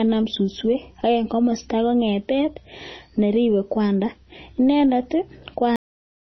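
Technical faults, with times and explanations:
Throughout: MP3 compression, likely the cause of the plainly audible watery, swirling speech with nothing above 6.1 kHz, consistent with a low bitrate around 24 kbps.
5.76 s: cut-off end, the speech stops mid-sound and drops straight to digital silence with no decay, as the final buffers were never written or played.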